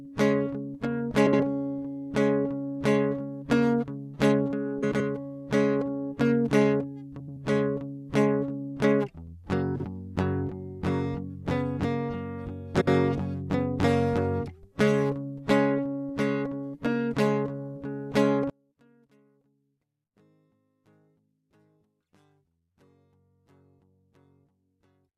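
Music, with two distinct problems. First, there are five short garbled flutters at 1.26–1.40 s, 4.82–5.01 s, 7.20–7.37 s, 9.75–9.85 s and 12.74–12.88 s. Each one is a case of frames out of order: two adjacent blocks, each about 43 to 85 ms long, get played back swapped. You hear a stutter where the music jumps forward then back, but nothing goes missing and the timing carries on. The block sizes fit frames of roughly 21 ms. Second, from 18.5 s to the end the mono mix collapses, dropping by about 37 dB, so the centred parts all but disappear and only a faint residue of whatever differs between left and right remains. That's the classic sound of one channel inverted in polarity, which is the likely cause here: summed to mono, the shared content cancels itself out.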